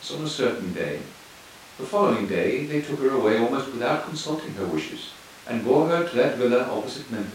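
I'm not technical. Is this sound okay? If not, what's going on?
Yes, this sound is okay; nothing is going wrong in it.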